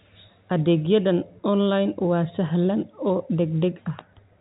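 The speech carries the narrow band of G.711 telephone coding, with nothing above about 3.8 kHz, and no technical fault can be heard anywhere in the signal.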